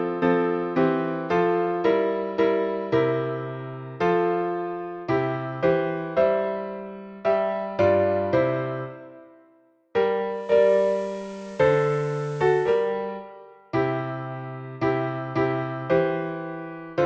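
At 10.27 s the receiver lost its digital signal and cross-faded over 475 ms to the station's FM broadcast, returning to digital at 12.97 s. This is digital radio blending to analogue: the level shifts by about 2 dB, and hiss appears around 30 dB below the signal.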